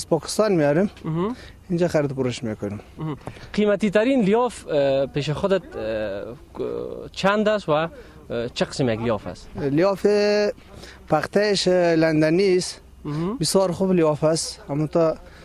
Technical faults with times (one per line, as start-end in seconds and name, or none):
none